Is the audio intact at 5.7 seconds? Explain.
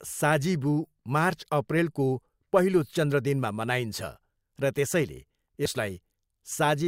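No. At 5.65 s, just after "र त्यसैले", compressed frames are skipped: the decoder never plays a short run of encoded audio, either because it is missing from the file or because it was rejected as damaged. The sound jumps ahead by roughly 40 ms, which fits two 20 ms frames. At the join, a sliver of the speech is lost.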